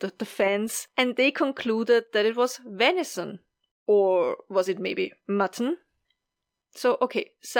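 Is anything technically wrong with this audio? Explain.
Yes, there's imaging from linear upsampling across the whole clip. The speech sounds like it was raised from a rate near 22 kHz to 48 kHz by joining samples with straight lines. That dulls the top end and leaves a mirrored image roughly 30 dB down between 11 and 22 kHz, which gives sibilants a faint metallic shimmer.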